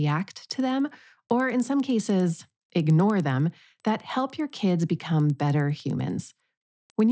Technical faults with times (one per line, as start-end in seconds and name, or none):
0.00-7.11 resampler restarted on every block